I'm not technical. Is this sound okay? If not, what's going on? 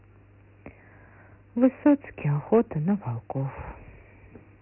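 No. Throughout, the speech has Dialogic VOX ADPCM damage, the old phone-menu format. Nothing above 3 kHz survives, and a gritty hiss trails the speech, unlike a merely muffled phone line.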